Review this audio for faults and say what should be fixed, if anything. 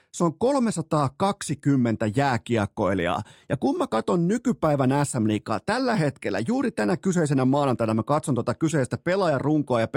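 From 0.0 to 2.99 s the speech carries a faint gritty fizz, a sign of crude rate conversion. It fits a 44.1 kHz to 48 kHz change done by linear interpolation with no anti-aliasing filter, which leaves an error roughly 40 dB below the signal, following loud and high sounds. A spectrogram would show faint, inharmonic lines and mirrored images that don't track the voice's harmonics. Converting with a proper band-limited resampler would prevent this.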